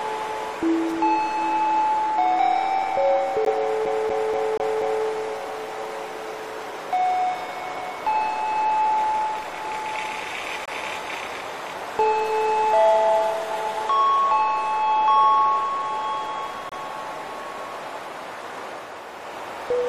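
A brief irregular burst of crackle and scratching cuts through the audio from 0.89 to 0.97 s, chopping the sound for about 75 ms. This is loose connector crackle: a worn or dirty contact in the signal path opens and closes as it shifts, breaking the signal into fragments, and any DC offset on the line turns each make or break into a small pop. Hard-edged holes of silence appear at 3.45 s (about 15 ms), 10.66 to 10.68 s (about 24 ms) and 16.69 to 16.72 s (about 26 ms), falling at the boundaries of 6 s segments. That regularity identifies a gap between stream segments: the timestamps of consecutive 6 s segments don't quite meet, so the player pads the mismatch with silence. Nothing is lost from the audio; time is inserted at each boundary. From 3.85 to 5.06 s a fast, even stutter takes over as one slice of about 240 ms plays five times in a row, each restart preceded by a tiny mute. This is a CD stuck on one turn: a scratch knocks the laser back one track at the same point on every rotation, so the player keeps rereading the same stretch, with the short mute marking each jump, until it finally breaks free and continues.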